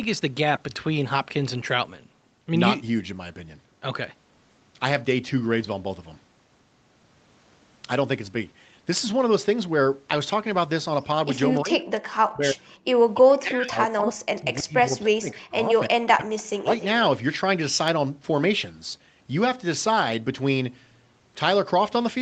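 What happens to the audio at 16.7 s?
Around 16.7 s a faint, delayed copy of the talker comes back at about 20 dB below the direct speech, trailing it by roughly 293 ms and heard from 16.37 to 16.85 s. This is an echo leak. The far end was likely playing the call over a loudspeaker, and its echo canceller did not fully remove what its microphone picked up, so the residue was sent back down the line as a late repeat.

The same moment is also the tail of a longer stretch, 13.2 to 16.68 s, where the speech dips sharply, at its deepest by about 40 dB, and is affected for roughly three seconds in total. This is speech suppressed in double talk. Likely, with both sides talking at once, the echo canceller could not tell the local talker from loudspeaker echo and turned everything down, pulling the voice down until 16.68 s.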